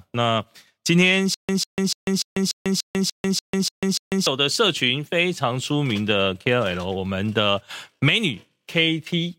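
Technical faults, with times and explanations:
1.34 to 4.27 s, stutter with silent gaps: A 147 ms fragment of speech repeats ten times, each followed by about 145 ms of digital silence, giving an even 292 ms cycle. This likely comes from a stalled stream replaying its last fragment at each retry. The speech meant for that span is lost.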